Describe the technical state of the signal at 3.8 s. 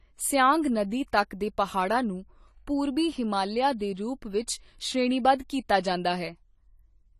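At 3.79 s, between "ਪਹਾੜਾਂ ਨੂੰ ਪੂਰਬੀ ਹਿਮਾਲਿਆ" and "ਦੇ ਰੂਪ", an 18 ms pre-echo: transform-block quantisation noise spills ahead of the attack as a brief hiss, softening its onset. Underneath, plainly audible AAC compression, likely low-bitrate AAC-LC around 32 kbps, leaves nothing above 14 kHz and a dull, smeared texture.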